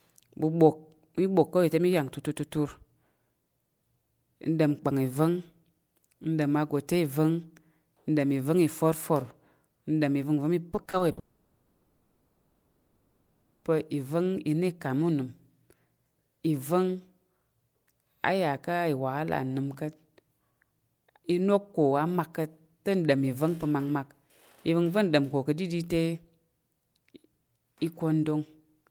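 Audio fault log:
10.71–11.19 s, repeated packet loss (robotic sound): a choppy stutter with pieces missing. Packets were repeatedly lost or late, leaving six holes of up to 60 ms, 180 ms in all. Each was patched by repeating the preceding sound, so over a third of this half-second is synthetic filler.
11.19–13.67 s, long network dropout: the sound collapses into a droning continuation of what came before that fades away, with about a third of a second of silence, before audio returns at 13.67 s with nearly 2.5 s gone. The likely cause is no audio arriving, with the receiver stretching the last sound.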